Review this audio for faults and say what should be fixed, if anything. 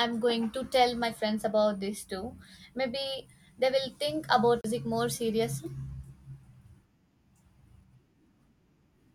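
A CD skip at 4.61 to 4.64 s: the pickup jumped tracks, muting for around 30 ms before the speech resumes elsewhere. Re-rip from a clean disc with secure, error-checked extraction on a stable drive.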